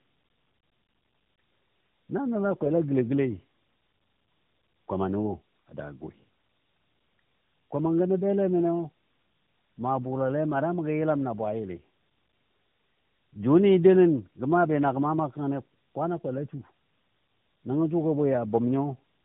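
Throughout, tandem speech coding re-encodes already degraded speech at each link, consistent with two AMR-NB stages; nothing above 3.7 kHz survives, leaving it rough, muffled and warbly.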